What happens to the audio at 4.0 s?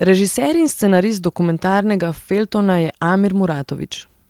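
Nothing goes wrong at 4.0 s; the speech carries on intact through that moment with no dropout, click or distortion.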